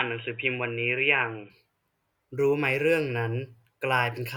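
From 0.0 to 1.5 s the speech sounds boxy, with nothing above 3.8 kHz, then clears seamlessly. This is likely an input switched to a poorer device.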